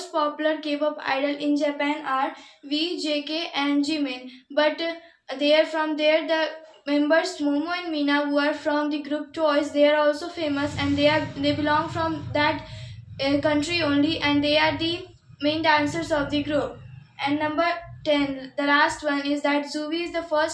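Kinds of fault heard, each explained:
Nothing stood out on listening to this audio.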